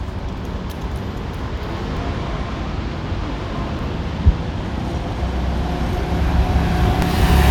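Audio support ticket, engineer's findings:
Short glitches at 1.97 s, 3.79 s and 7.02 s, each just a few milliseconds long. Looks like damaged data in the compressed stream: corrupt bytes trip the decoder, it loses frame sync and blips out garbage while hunting for the next header.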